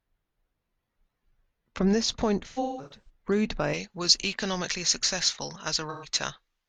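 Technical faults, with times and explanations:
2.48 to 3.09 s: AAC frame loss with concealment. Scattered lost frames totalling 341 ms, longest run about 150 ms, patched from earlier spectra, giving smeared, noisy gaps.
3.74 s to end: pre-emphasis left on. Treble boost never undone, about 11 dB hotter at 10 kHz than 1 kHz, so the speech turns thin, bright and sibilant.
5.90 to 6.08 s: AAC frame loss with concealment. About 128 ms of frames lost and filled from the last good spectrum, heard as a brief smeared, phasey patch.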